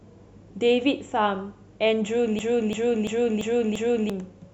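At 2.39 s the speech gets caught in a system hang loop that runs until 4.10 s. The machine or its audio driver stalled while the sound hardware kept replaying the same ring buffer, so one 341 ms chunk repeats exactly, five times over at about 2.9 per second. A slice that long gives a choppy, machine-gun stutter rather than a buzz. The loop length fits a 16384-sample buffer, and about a second and a half of real audio is lost underneath it.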